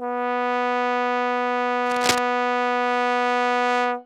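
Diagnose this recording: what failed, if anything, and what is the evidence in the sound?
Cable scratch noise from the analogue wiring. From 1.86 to 2.18 s, a dense, irregular burst of scratching and rustling sits over the music at a level only slightly below it, then stops cleanly. The uneven, crackly texture points to contact resistance fluctuating rapidly in the signal path, most likely a worn cable, connector or control being moved during that third of a second and briefly modulating the connection.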